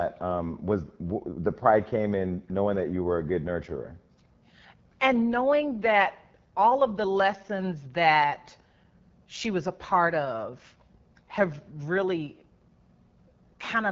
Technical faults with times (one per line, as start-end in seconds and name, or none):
0.00-13.91 AMR wideband (HD Voice) codec